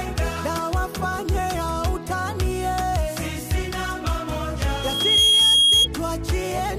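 A loudspeaker feedback squeal breaks out near the end of this audio: a microphone is picking up the loudspeaker it drives, and around 3.3 kHz the loop gain climbs past one, so that frequency reinforces itself on every pass. From 4.68 s a pure tone emerges and swells over roughly half a second into a piercing squeal, sitting about 10 dB above the rest of the sound until it stops at 5.88 s.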